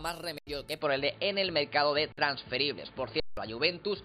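At 0.38 s the sound drops out for 85 ms, up to 0.47 s. That's an underrun with held sample: the output buffer ran dry, so the converter just sat on its last value and the waveform went flat. The stall fits a 4096-sample buffer, and around a tenth of a second of live audio went missing meanwhile, so it doesn't pick up where it stopped.

From 0.81 s to the end, the character changes, most likely because the input switched to a poorer device. There's no gap at the changeover. The sound simply goes dull and boxy, with nothing above 4.8 kHz. The level shifts by roughly 5 dB, and a new noise floor appears, sitting about 30 dB under the signal.

The underruns come back at 2.12 s, a 54 ms flat stretch with around 50 ms lost, and at 3.20 s, the longest at 171 ms, which points to an 8192-sample buffer. Roughly 150 ms of audio disappears there. Both hold flat and then rejoin.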